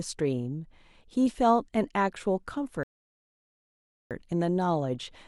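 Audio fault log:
2.83–4.11 s, rebuffering stall: the speech cuts to silence for about 1.27 s, then carries on from the exact point where it stopped. The player had used up all the audio it had downloaded, so it paused playback and waited for more data to arrive. Nothing is skipped or repeated. The gap simply adds about 1.27 s of dead air, which breaks the natural rhythm of the speech.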